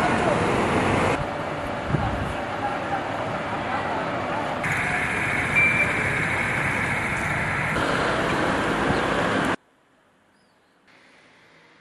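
At 9.55 s the sound suddenly drops by about 37 dB and stays nearly gone right through to the end at 11.81 s, leaving only a faint residue. That's the classic signature of one channel inverted. The likely cause is that one side of the stereo pair has flipped polarity, so when the two are summed to mono, everything they share cancels out and only their small differences survive.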